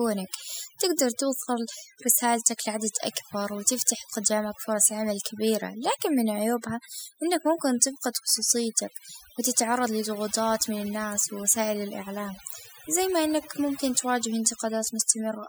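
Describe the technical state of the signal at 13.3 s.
At 13.3 s the speech still carries overdone noise removal, present across the whole clip. Bands near the noise estimate are pulled down or cut, leaving a lowered background that breaks up into twinkling specks. A spectrogram shows scattered isolated dots between dark gaps.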